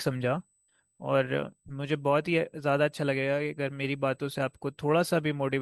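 USB whine runs through the whole recording as a thin, steady tone at 8 kHz, sitting roughly 45 dB below the speech. The USB bus polls in 125-microsecond microframes, and the current drawn on each of those ticks couples into the audio through a shared power or ground path. The result is a fixed-pitch whistle at exactly the microframe rate.

A corrupt frame decoded at 1.68 to 1.72 s produces a short, glitchy blip of wrong sound cutting into the speech. Bits inside the compressed stream were damaged, but the decoder played the data rather than concealing it, so misread gains and codes scattered energy at frequencies the original never had. The burst peaks around -30 dBFS, and its roughly 40 ms length points to a few consecutive damaged frames.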